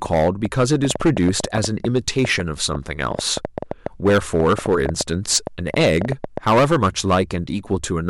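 It's a speech clip with two problems running at once. First, there's hard clipping the whole way through: the level was pushed around 12 dB past what the chain could pass, so a few percent of the samples get sliced flat. That puts a harsh, fuzzy edge on every louder syllable. On top of that, from 0.06 s to 6.38 s there's a train of clicks, roughly forty sharp ticks at an uneven pace of about six per second, sitting around 10 dB above the speech and audible in the gaps too. It's likely interference or a faulty connection or power supply dropping pulses into the signal.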